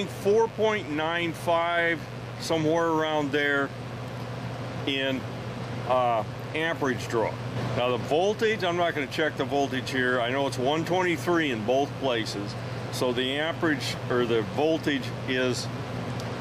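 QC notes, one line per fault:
throughout, mains buzz: a steady, raspy buzz sits under the sound for the whole clip, roughly 20 dB below it. Switching spikes at twice the 50 Hz mains rate leak in through poor shielding or a dimmer, carrying a stack of harmonics up into several kHz.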